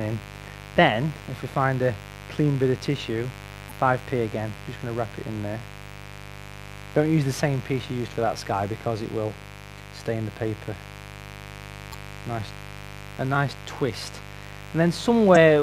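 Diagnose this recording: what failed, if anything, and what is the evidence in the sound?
A mains buzz from the analogue wiring stage runs the full length, roughly 15 dB below the signal. Switching spikes at twice the 50 Hz cycle leak in through a dimmer, rectifier or missing shield. On a spectrogram, harmonic lines at 50 Hz spacing climb into the kilohertz range.

Damaged data in a compressed stream, at the codec or storage stage, causes brief glitches at 3.67–3.72 s, 11.90–11.95 s and 15.32–15.37 s. Corrupted bytes make the decoder misread frames and resync. The waveform shows short disruptions at those points.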